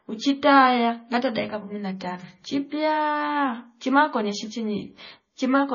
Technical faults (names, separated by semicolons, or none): MP3 compression